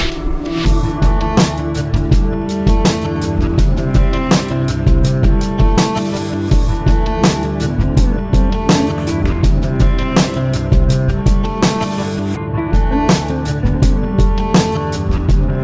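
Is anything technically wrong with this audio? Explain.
No, nothing is technically wrong with this audio.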